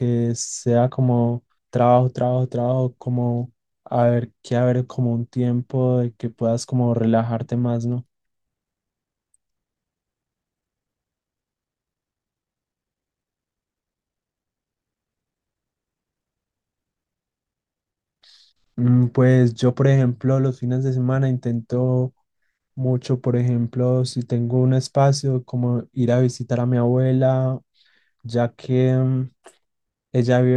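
No technical faults can be heard in this speech recording.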